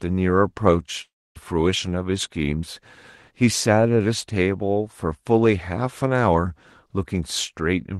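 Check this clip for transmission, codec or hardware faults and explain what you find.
One fault stands out, a gap in the speech early in the clip, heard through a call codec whose high end stops around 12 kHz.

Long network dropout, 1.01 to 1.37 s: likely lost packets. The receiver extends the last sound as a fading buzz, then near-silence, and the speech resumes without the missing part.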